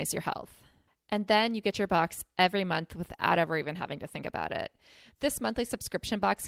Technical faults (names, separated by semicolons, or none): none